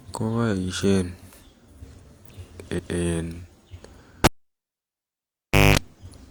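A speech recording with two separate problems. First, at 2.74 s there's a stutter from repeated frames: a block of about 186 ms, from 2.74 to 2.93 s, plays a second time, which fits a short run of four compressed frames being written or sent twice. You hear the same fraction of a second again, and the clip runs about 186 ms longer as a result. Then from 4.24 to 5.78 s it's a classic cable pulled and plugged in. There's a pop as the live lead comes out, then roughly a second and a half of near silence. You get about 0.21 s of 50 Hz mains buzz while only the tip is touching, and a second pop when the plug seats fully and the sound comes back.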